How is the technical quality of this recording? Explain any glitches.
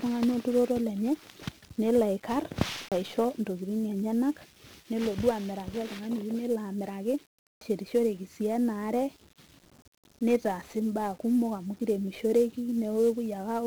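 The technical quality is poor, with heavy codec damage throughout and two brief skips.

The whole recording has passed through 1-bit DFPWM compression. With only one bit per sample nudging an adaptive level up or down, the coder cannot follow the waveform closely, and the density of the damage fits a rate around 48 kbps. The error becomes strong broadband noise laid over the speech, which sounds fuzzy and crackly, with the upper frequencies sunk beneath a constant hiss.

There are two CD skips, from 2.89 to 2.92 s and from 7.59 to 7.61 s. Each time, the laser lost its track and landed on a different turn of the disc's spiral. The player muted briefly, for a few hundredths of a second, before resuming from the new position. Each skip is heard as a small tick and a sudden jump in the speech, with a piece missing or repeated rather than a smooth continuation.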